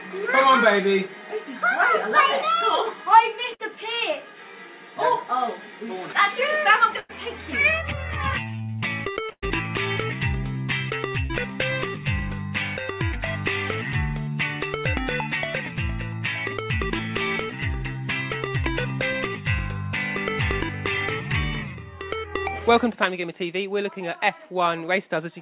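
Bursts of packet loss at 3.54, 6.99 and 9.31 s drop about 60, 100 and 120 ms; the receiver extends the last sound as a fading buzz or hiss, and the third burst ends in 60 ms of silence. A short concealed packet loss at 11.26 s drops 40 ms, filling 32 ms with a synthesized continuation, heard as a brief smear, all over a G.711 A-law call path that cuts everything above 4 kHz.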